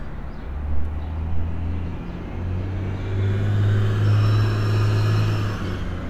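No technical faults can be heard anywhere in this recording of sounds. There is nothing to flag at any point in it.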